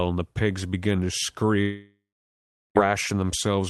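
Speech clip, and right after "the pigs began to" at 1.61 s the audio smears into a fading buzz, then sits silent for about 0.74 s until 2.77 s. That's likely a long network dropout where the receiver papered over the missing stretch before resuming without it.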